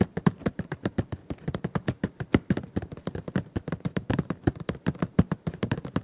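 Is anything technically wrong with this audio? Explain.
Yes, there are two faults, heard through a narrowband call path whose spectrogram shows nothing above 4 kHz, consistent with G.711 mu-law.

At 3.32–3.34 s a skip ahead occurs. About a second of audio was dropped while later audio waited, so playback jumps forward with no gap. The waveform shows an abrupt splice with no silence.

From 3.44 to 5.82 s a jitter buffer speed-up runs at 110%. The buffer removed short pitch-period pieces, roughly a fifth of a second in total, so the audio sounds hurried at unchanged pitch. The spectrogram shows compressed timing but no frequency shift.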